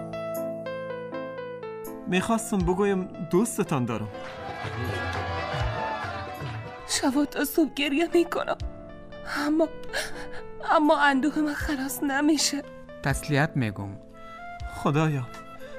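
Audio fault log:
No fault found in this audio.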